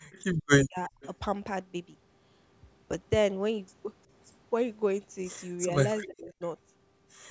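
At 0.03 to 0.09 s the speech dips by about 10 dB, which is speech suppressed in double talk, likely because both ends were talking at once and the echo canceller, unable to tell the near talker from loudspeaker echo, turned everything down. At 0.64 to 0.95 s the same happens far harder, with gaps around 40 dB deep.

At 0.12 to 0.24 s a faint, delayed copy of the voice appears about 30 dB below the speech. This is echo leak, likely from a far-end speakerphone whose canceller let part of the returned sound through. It comes back again at 1.01 to 1.09 s, about 25 dB down. Both times the copy trails by 354 ms, and that fixed lag is what sets it apart from room reverberation, which smears the sound continuously instead of repeating it.

Later, speech suppressed in double talk returns with a mild dip of about 5 dB at 5.65 to 5.75 s, then a deep one of about 35 dB at 6.06 to 6.41 s, where the voice is turned down for about 400 ms in all. 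Throughout, the call microphone processing cuts off everything above 8 kHz.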